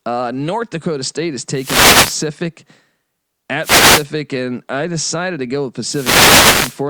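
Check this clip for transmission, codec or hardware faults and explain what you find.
The speech carries three wireless microphone noise hits, from 1.52 to 2.27 s, from 3.61 to 4.07 s (just before "and I decided to"), and from 5.84 to 6.83 s (right after "decided to go with"). Each is a swish of static that swells as the FM radio link fades through cancelling reflections and receiver noise rises over the voice. Unlike a digital dropout, the signal never cuts to silence; noise briefly floods in instead.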